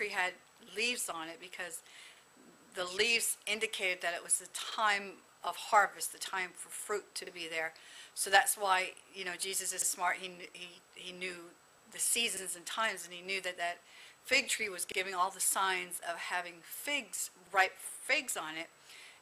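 Overlapping chunks cause a 50 ms stutter at 2.17, 4.72, 7.27, 9.82, 12.37, 14.92 and 17.47 s. Each 2.5 s block starts before the last ends, so every join replays 50 ms. Waveform and spectrogram show a duplicated slice and a vertical seam at each join.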